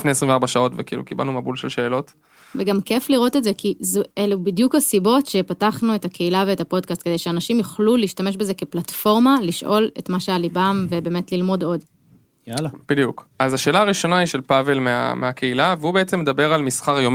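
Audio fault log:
throughout: clock drift between sender and receiver. The sending end's audio clock runs fast relative to the receiver's, by roughly 5 percent, so samples arrive quicker than they are played out and the jitter buffer keeps filling. To keep latency bounded, the receiver has to discard short pieces of the incoming speech over and over, and the resulting small timing hiccups recur across the whole clip at uneven spacing rather than on a fixed beat.
0.05–17.08 s: repeated timing corrections. For almost the full length of the speech the receiver trims short segments to stay in step with the faster sender, giving an effective playback rate of 105 percent. Every edit goes the same way, removing material, never repeating it, but the cuts are irregularly spaced. Each one is small, so what comes through is a faintly rushed, slightly unsteady pace with occasional tiny skips where a piece has been dropped.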